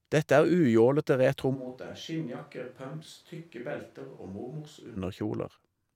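Switch to a distant microphone, 1.56 to 4.96 s: the speech abruptly turns roomy and hollow, about 10 dB quieter with more background noise, likely because the close microphone dropped out.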